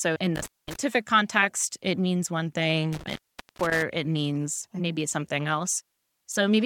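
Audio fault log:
0.36–0.76 s and 2.92–3.82 s, intermittent contact: a loose connection drops the signal, about 0.22 s before "context it means one" and about 0.44 s right after it, ahead of "it means maybe". Crackle marks each break, and faint hiss fills the gap.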